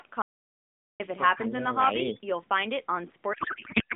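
A short speech clip carried over AMR narrowband, with its line band of roughly 150 Hz to 3.5 kHz, has three faults. From 0.22 to 1.00 s there is an audio dropout to silence: about 0.78 s of sound is gone, and the waveform sits flat with no room tone, a blank column on the spectrogram, likely from the input being lost while the recorder kept writing zeros. From 1.32 to 2.21 s the speech is suppressed in double talk, with an echo canceller probably misjudging the talker as echo and pulling the level down by up to about 10 dB over most of that span. The waveform envelope shrinks in patches. From 3.34 s to the end a codec payload misread turns the speech into garbled warbling noise that barely tracks it, which fits octet-aligned AMR frames being decoded as bandwidth-efficient. The spectrogram loses its harmonic striping and shows smeared, disordered energy.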